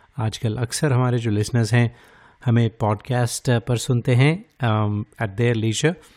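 This speech clip has a drift correction step. From 3.16 s to 4.68 s the audio suddenly runs about 5.3% fast. Pitch rises with it by about 89 cents, close to a semitone. Then both snap back to normal. The likely cause is clock-matching software stepping the playback rate to drain a buffer that had grown too full. Speed and pitch move together because the rate change is a plain resample.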